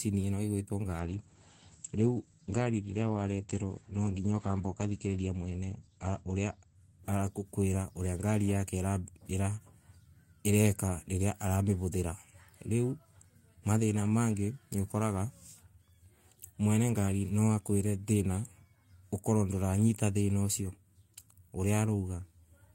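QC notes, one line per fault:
1.02–8.85 s, call bitrate drop: the bandwidth estimate fell and the encoder got squeezed. The sound fits a fall from about 32 kbps to roughly 11 kbps, sitting at the bottom for about 4.7 s. With so few bits, Opus codes everything more coarsely, which gives the rough, watery texture. It also pulls the top end in from 20 kHz to 8 kHz, so the speech goes noticeably dull and muffled until the rate climbs back.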